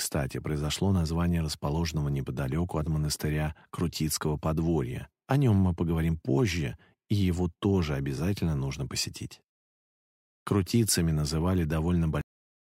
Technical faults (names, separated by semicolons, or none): cut-off end